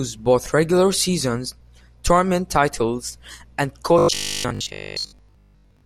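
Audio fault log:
3.99–5.85 s, robotic sound from repeated short buffers: the speech becomes a rigid 50 Hz metallic buzz, likely from a 20 ms buffer replayed over most of this stretch.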